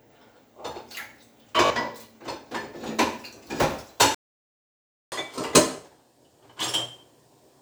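At 1.66 to 1.70 s a Bluetooth stutter replays a short slice for about 40 ms, which fits a couple of lost packets, heard as a brief buzz and shown as repeated identical waveform cycles.

From 4.15 to 5.12 s a playback stall, likely from the player running out of data, cuts the sound for nearly a second, leaving a flat waveform and a blank spectrogram.

From 5.12 s to the end, catch-up at higher speed plays at 1.15 times normal, raising pitch about two semitones; spectrogram harmonics shift upward and events compress.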